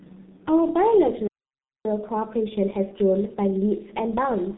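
Speech that sounds muffled and hoarse throughout, with smeared consonants and nothing above about 3.9 kHz, is the signature of the G.723.1 codec. Its low bitrate, which fits roughly 6.3 kbit/s, and narrow telephone band discard the upper spectrum and model the voice coarsely. From 1.27 s to 1.85 s the sound cuts out abruptly for about 0.58 s before resuming. This playback stall was likely caused by the player running short of data or its output thread being held up. From 1.85 s to the end, everything runs audibly quicker and sits about one and a half semitones higher. That is catch-up at higher speed: the player resamples its backlog at 1.1 times normal speed to recover the time lost in the stall.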